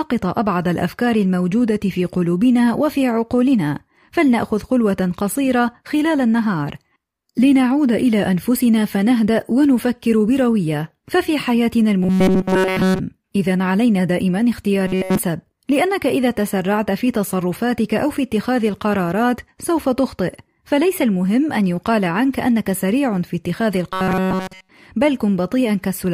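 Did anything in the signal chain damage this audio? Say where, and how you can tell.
Yes: robotic sound from repeated short buffers at 12.03–13.00 s, 14.87–15.19 s and 23.93–24.69 s. In each stretch the speech collapses into a rigid, metallic buzz pinned at 188 Hz that only loosely follows the words, and essentially all of it sounds like repetition rather than new audio. The likely cause is at the driver or buffer stage: audio arrived too late, so a block of about 5.3 ms was replayed over and over, stamping that fixed pitch on the sound.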